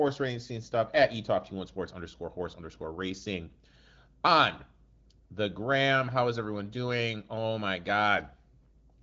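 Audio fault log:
No faults are heard in this speech clip. The AMR wideband (HD Voice) codec is audible as a band limit with nothing above about 7.5 kHz and only light coding texture.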